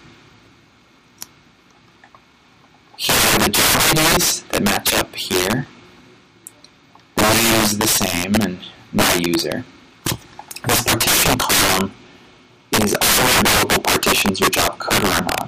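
Integer overflow runs through the whole clip. The signal is driven about 20 dB too hot. Around seven percent of samples exceed the integer limit and wrap to the opposite sign instead of being clamped. Each loud peak becomes a violent crack, far harsher than clipping.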